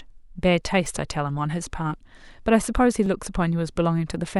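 A speech recording with a regular click that appears at 0.86 s and recurs every 1.1 s through 4.16 s, so around four ticks sit in the talking. The steady spacing is the signature of clock drift buffer slips. The likely cause is two devices running on independent clocks that disagree by something on the order of 700 ppm, letting the buffer between them drift until a short block of a few tens of samples is dropped or repeated, leaving a discontinuity in the waveform each time.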